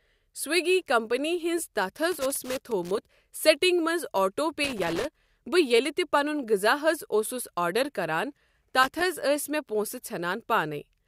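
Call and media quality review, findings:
Loose connector crackle, speech path: irregular scratchy bursts at 2.12–2.98 s, 4.64–5.30 s, 8.83–9.04 s. Worn or dirty contact intermittently breaking signal. Check cable and jack.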